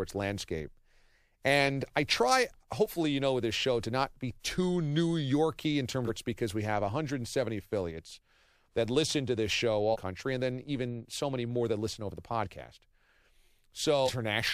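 Compressed frames skipped at 6.06–6.10 s, 9.92–9.96 s and 14.05–14.09 s in this speech clip make it jump forward: roughly 0.4 s, 0.3 s and 0.7 s of audio vanish. Those gaps fit whole 46.4 ms codec frames going missing or being rejected as damaged, about ten, seven and fifteen at a time.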